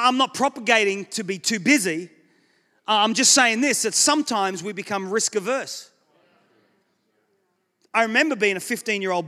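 No technical faults are audible anywhere in the recording.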